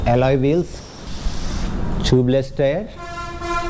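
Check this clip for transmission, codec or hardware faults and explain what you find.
One fault is audible, a short gap where the sound is replaced by noise.

Sound dropped by the voice detector, 0.80 to 1.07 s: for about 270 ms the sound gives way to a steady, featureless hiss, and roughly 200 ms of real content is missing before it resumes. The likely cause is the sender's voice activity detector judging that stretch to be background and halting transmission, so the receiver filled the gap with comfort noise until the detector triggered again. Across the clip the G.722 call path leaves nothing above 8 kHz.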